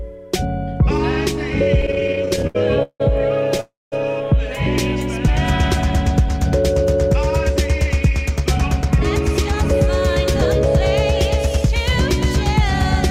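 Repeated stalls (stutter) run from 1.81 to 3.60 s. Packets kept arriving late, so the jitter buffer emptied 17 times, the longest gap 171 ms. The receiver stretched the last sound to fill about 410 ms, nearly a quarter of that stretch, so the audio drags and stutters while nothing is lost.

A call audio freeze follows at 3.60 to 3.94 s. The last sound is held as a fading buzz or hiss that drops to silence for about 200 ms, 314 ms in all, before the audio resumes where it stopped. The likely cause is packets held up in transit, leaving the jitter buffer empty.

A jitter buffer speed-up runs from 8.29 to 9.63 s. With too much audio queued, the receiver repeatedly cut short pitch-period pieces, roughly a tenth of a second in total. Playback runs at 106% speed at unchanged pitch and sounds slightly hurried.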